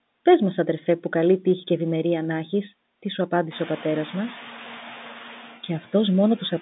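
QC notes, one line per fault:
Throughout, noise suppressor artifacts: the room noise, which rises by about 17 dB near 3.5 s, dips slightly in the pauses and swells back under the speech. The suppressor cuts bands it judges steady noise, frame by frame, by only about 3 dB.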